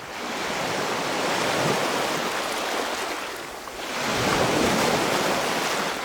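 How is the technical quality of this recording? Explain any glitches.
No glitches, dropouts or other technical faults can be heard anywhere in this recording of sounds.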